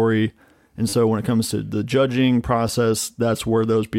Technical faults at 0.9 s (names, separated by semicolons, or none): repeated buffer